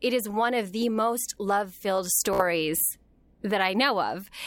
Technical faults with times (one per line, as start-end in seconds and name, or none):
2.33-2.42 Bluetooth stutter